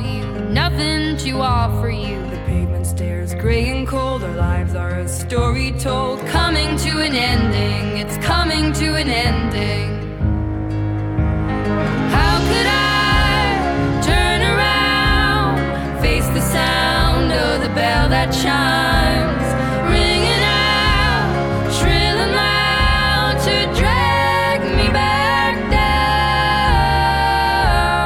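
At 7.94 s there is a single bit error spike: one sample jumps to a wrong value and returns at the very next sample. A flipped bit in memory or on a digital transfer has shifted that sample by a power of two. It peaks at about −26 dBFS and is heard as one short, dry tick with energy spread across the whole spectrum, unconnected to the surrounding sound.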